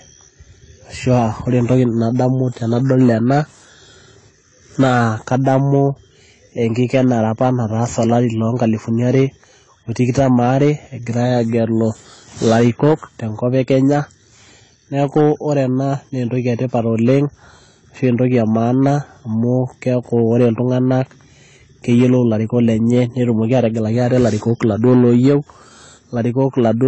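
Hard clipping runs through the whole clip: the speech drives a stage about 4 dB past its limit, so around one percent of the waveform is cut flat, adding crackle on peaks.

AAC compression is likely also present throughout, with plainly audible coding damage. Nothing survives above 10 kHz, so the speech sounds dull, which fits a low bitrate near 24 kbps.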